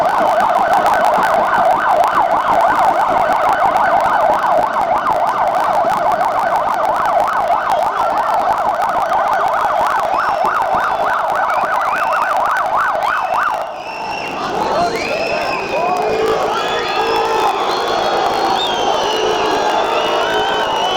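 Block size mismatch (truncated) runs through the whole clip: the tail of each block is discarded, producing a buzz at about 54.4 Hz, the block rate, which fits 1024-sample blocks, while the audio plays 1.16 times too fast at roughly its normal pitch.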